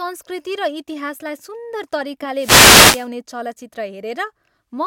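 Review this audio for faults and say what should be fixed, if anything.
A wireless microphone noise hit runs from 2.34 to 3.09 s of the speech, heard as a burst of static lasting about three quarters of a second. The radio signal from the FM transmitter dropped into a fade where reflected paths cancelled, so the receiver's noise floor rose over the voice. On a spectrogram this shows as a broadband haze of noise; the waveform shows a raised, fuzzy floor. Preventing it calls for a true-diversity receiver, antennas placed with clear line of sight to the transmitter, and a clean, well-coordinated frequency.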